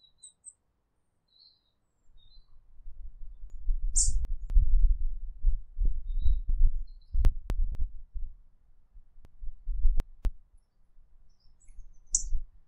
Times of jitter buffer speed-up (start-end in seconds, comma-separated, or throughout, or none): 5.95-8.69